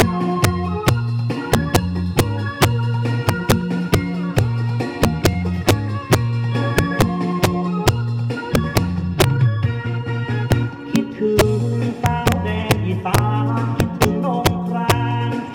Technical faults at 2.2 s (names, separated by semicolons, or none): integer overflow